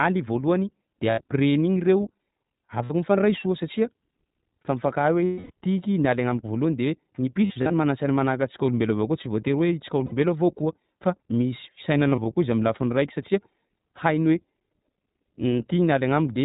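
The whole speech clip runs through the iLBC codec, which fits 15.2 kbps with 20 ms frames: nothing above 4 kHz, and a slightly rough, synthetic edge throughout. Lost iLBC frames hit at 1.10, 2.84, 5.25, 7.46–7.74 (scattered), 10.06 and 12.10 s. Each time the decoder repeats the last pitch cycle plus noise, giving a brief, slightly buzzy or breathy held vowel. The longest is about 260 ms before "tiky nialy", and the voice snaps back right after every gap.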